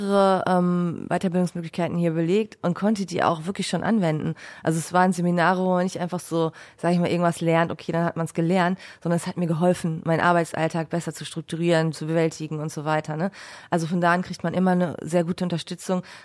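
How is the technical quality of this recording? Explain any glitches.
No technical glitches can be heard in this speech recording. There is nothing in the audio that needs explaining.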